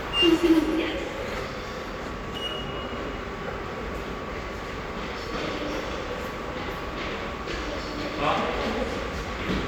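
No technical faults can be heard in this recording.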